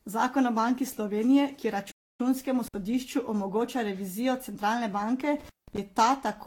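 From start to finish the speech has a swirly, hollow quality, with smeared consonant attacks and a watery shimmer that sounds worse than a mid-rate encode alone would. This is most likely generation loss. The audio appears to have been decoded and re-encoded with Vorbis around seven times, at settings that point to roughly 67 to 69 kbit/s. Each pass quantised the signal on a shifted frame grid, so the noise and spectral gaps piled up. Nothing reaches above about 19.3 kHz.

At 1.92 s the sound stops dead mid-flow and stays silent for about 280 ms. It picks up again at 2.20 s. This is a playback stall, likely caused by the player running short of data or its thread being blocked until output could resume.

At 2.67 s, just before "omogoča revizijo centralne banke", there is a brief dropout lasting about 58 ms, until 2.74 s. It has crackle at both edges and only faint hiss in between. This is intermittent contact: a loose plug or cable opened the line for a moment. 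The same fault returns at 5.39 s, just after "omogoča revizijo centralne banke". This time the line stays open for about 186 ms and closes again at 5.78 s, with the same crackly edges around a near-silent gap.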